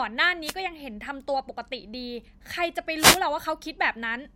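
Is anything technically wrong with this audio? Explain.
Yes. At 0.43 to 0.55 s and 2.97 to 3.20 s, short bursts of static swish over the speech. This is a wireless microphone noise hit: reflections briefly cancel the FM radio signal, so receiver noise surges through.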